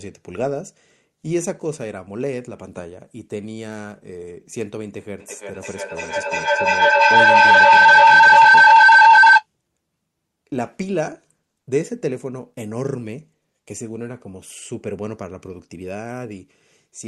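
A speech recording in which two devices in the same room joined the call, so sound from one loudspeaker re-entered the other microphone and gained level on every pass around the loop. The result is a feedback howl from 5.2 to 9.46 s: a tone near 1.5 kHz that swells to about 16 dB above the speech, with a loop delay of roughly 0.3 s, all over a call path whose top end stops around 12 kHz.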